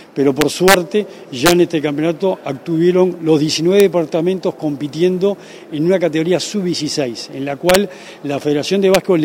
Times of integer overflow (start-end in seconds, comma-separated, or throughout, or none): 0.41-0.74, 1.46-1.52, 3.80, 7.69-7.75, 8.94